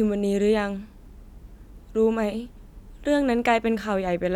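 No technical faults can be heard anywhere in this speech recording. There is nothing to place on a timeline and nothing to describe.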